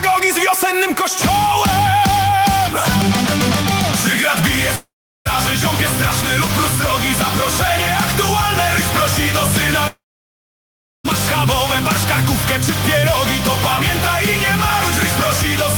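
Long network dropouts at 4.75 to 5.27 s and 9.87 to 11.06 s: the sound smears into a fading buzz, then goes silent for about 0.38 s and 1.07 s, likely because packets stopped arriving. It resumes with roughly half a second, then over a second, missing.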